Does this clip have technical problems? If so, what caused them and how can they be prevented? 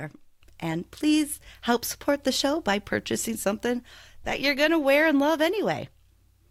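Yes. Throughout the speech there is a 50 Hz buzz that follows the signal, caused by a resampler restarted on every block: each 20 ms block was converted separately, which fits a 44.1 kHz to 48 kHz conversion, leaving a small error at every block edge. Prevent it by running one continuous resampler that carries its filter history across block boundaries.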